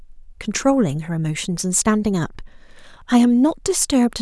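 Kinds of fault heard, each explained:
No kinds of fault turn up here; the speech comes through without any dropouts, glitches or distortion to point to.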